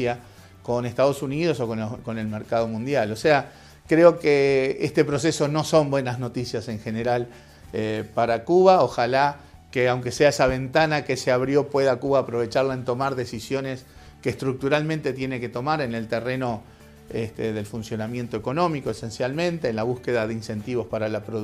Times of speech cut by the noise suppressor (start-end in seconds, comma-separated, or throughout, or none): none